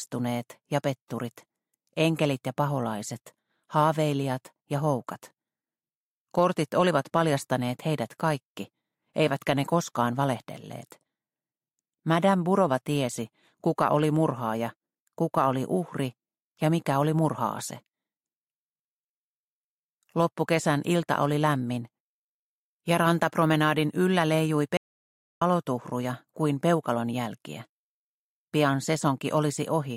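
The input to the recorder most likely dropped out for a moment, through a lost connection or a brief mute, while the recording carried on writing silence, giving an audio dropout to silence from 24.77 s to 25.42 s. The sound stops abruptly and resumes just as abruptly about 0.64 s later, and the gap is dead silence with no room tone underneath, so whatever was happening in the sound during that stretch is simply missing.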